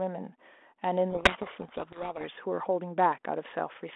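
From 1.10 to 2.25 s a codec payload misread buries the speech in harsh, rasping distortion. The G.726 code words are read with their bits in the wrong order, so the difference values decode wrongly. A spectrogram shows dense hash across the voice band, and the waveform turns jagged and noisy.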